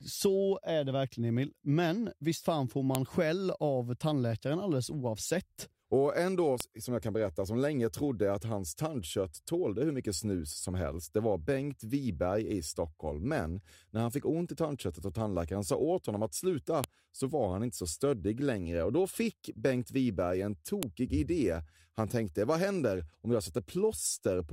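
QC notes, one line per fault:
2.95, 6.60, 16.84, 20.83 s: file header played as audio. A sharp, loud snap at each segment join (after "visst fan får", "en då", "åt honom att sluta"). It comes from leftover WAV header bytes being decoded as samples. Unlike a dropout, there is no gap, and unlike clipping, the click ignores the speech level.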